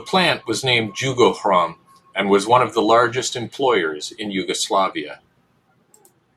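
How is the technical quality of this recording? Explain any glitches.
The recording has no technical glitches to explain. The speech runs without any interruption or disturbance at any point.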